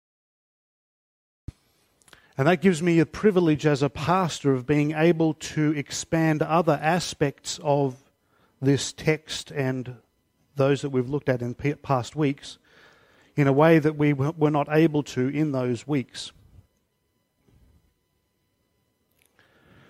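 The capture or stream began late, producing a cut-off start: the opening 1.48 s is digital silence, and at 1.48 s the audio switches straight into the middle of an ongoing sound, with no natural attack or fade-in leading up to it.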